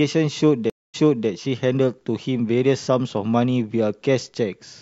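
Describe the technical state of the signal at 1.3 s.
At 1.3 s the speech is just coming back from a stream reconnect spanning 0.70 to 1.29 s: about 0.24 s of silence, then a fresh decoder fades in, resuming 0.35 s earlier. That repeated speech, not a simple gap, separates it from a dropout.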